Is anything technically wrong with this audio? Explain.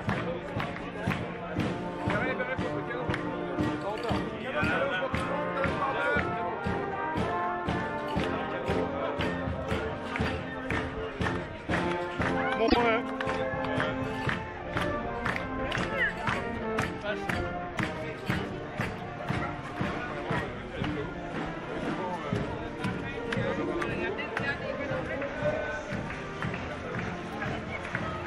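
Yes, there is a repeated-frames fault at 12.66 to 12.77 s. One compressed block of about 26 ms plays three times, which fits a single duplicated codec frame. This adds 52 ms and makes a brief stutter. A waveform shows identical repeating segments, and a spectrogram shows matching vertical slices.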